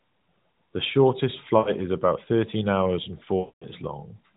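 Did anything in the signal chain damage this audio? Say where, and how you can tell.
Yes, there are lost AMR speech frames on the radio link. Just before "is about thirteen hours", 1.58 to 1.72 s smears and dips. After "about thirteen hours and", 3.40 to 3.69 s drags out and fades toward silence. The decoder repeated its last good pitch and vocal tract settings with falling gain.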